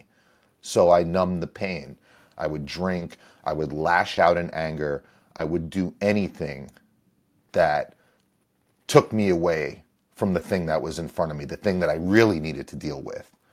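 Short concealed packet loss at 2.99, 4.15, 5.37 and 10.39 s: each 20 ms gap in the speech was filled by extending the preceding sound, leaving a brief smear.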